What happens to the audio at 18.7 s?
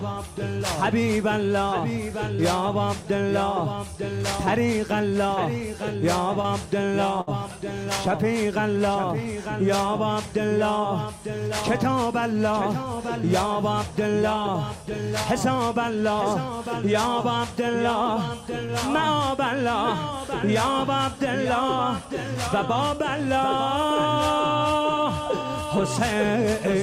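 Right around there, from 18.65 to 18.70 s, there's a short concealed packet loss. 40 ms of audio didn't reach the decoder in time, so it patched 32 ms by carrying the previous sound forward and blending back in, which leaves a quick smear or wobble.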